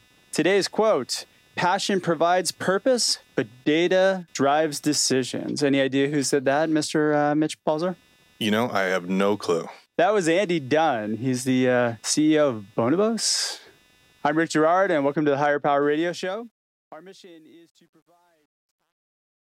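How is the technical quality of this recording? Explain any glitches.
The recording has two technical faults: a faint computer buzz throughout, and a fade-out that breaks down at its quiet end.

Computer activity noise runs the whole length. Changing load from the processor, graphics card or mouse disturbs the ground shared with the audio circuit, and that disturbance leaks into the signal. The result is a low buzzing chirp, pulsing at around 300 Hz and roughly 40 dB below the speech. It rises and falls with what the computer is doing rather than with the speech itself.

Truncation distortion on a fade affects the ending from 15.85 s to 19.42 s. The smooth fade-out runs from about 15.8 s to 19.4 s, but the digital stage doing it keeps too few bits and applies no dither. The behaviour fits a 10-bit stage. As the level drops toward the smallest step, the waveform collapses into a few coarse square steps. 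Between 16.98 s and 19.43 s the tail turns gritty.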